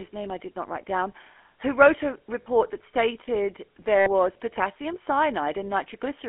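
GSM full-rate codec damage runs through the whole of this speech clip: the band stops at about 250 Hz and 3.4 kHz, and the voice carries a plainly audible buzzy, gravelly roughness. The codec models the vocal tract as a filter and drives it with a coarse, regularly spaced pulse excitation, which fits the 13 kbps full-rate coder. That crude excitation replaces the natural glottal source and gives the grainy texture. Lost GSM frames appear at 2.42 to 2.70 s and at 3.98 to 4.09 s. The first loss is about 40 ms of audio, which fits two 20 ms frames, and the second is about 80 ms, which fits four. In each case the decoder fills the gap by repeating the parameters of the last good frame, so the sound hangs on as a brief rough, metallic ring instead of cutting out.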